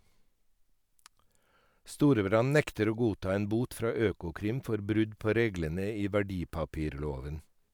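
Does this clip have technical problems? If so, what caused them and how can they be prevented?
No, nothing in this speech clip stood out as a technical problem on listening, so there is nothing here to trace to a cause or to prevent.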